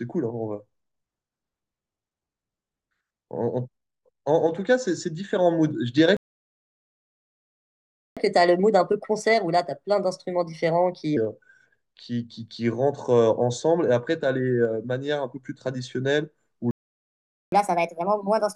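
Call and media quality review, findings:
Playback stall, 6.17 to 8.17 s: speech stops mid-flow into 2 s of silence, then resumes exactly where it stopped. Likely a buffer underrun or blocked thread in the player. Nothing skipped, unlike packet loss or a dropout.

Playback stall, 16.71 to 17.52 s: same signature, 0.81 s of silence, speech picks up at the cut point. Likely the player's buffer starving again. No concealment noise or missing syllables, so not a network-loss gap.

Catch-up at higher speed, 8.17 to 11.17 s: directly after the first stall, speech runs at 1.25x with pitch up roughly four semitones. The player resamples its backlog to recover lost time, then returns to normal speed. Temporary and tied to the stall, so not a sample-rate mismatch.

Catch-up at higher speed, 17.52 s to end: follows the second stall at 1.5x, pitch up roughly seven semitones, still fast when audio ends. 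Same resampling catch-up, more aggressive here.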